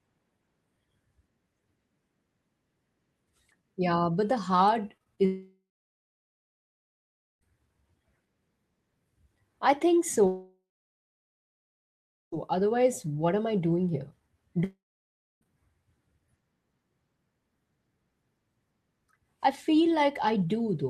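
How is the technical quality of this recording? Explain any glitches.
The recording is marred by repeated interruptions typical of a poor network connection.

Just after "but the hard", at 4.97, 5.04 and 5.15 s, there are three brief smears. This is short concealed packet loss: about 20 ms of audio went missing each time, and the receiver filled each gap by extending the preceding sound before blending back in.

At 5.25 to 7.43 s, 10.27 to 12.34 s and 14.64 to 15.43 s, the sound trails off into a fading buzz or hiss and then goes silent for about 1.8, 1.7 and 0.65 s before resuming with material missing. The likely cause is a long network dropout, where nothing arrived and concealment ran out.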